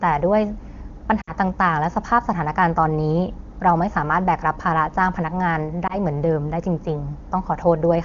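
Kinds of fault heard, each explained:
Lost AMR speech frames: corrupted radio frames were concealed by replaying previous pitch and vocal tract settings with falling gain, heard around 1.2 s as a drop to near silence and at 5.9 s as a brief dip or warble; waveform amplitude sags, spectrogram harmonics smear flat.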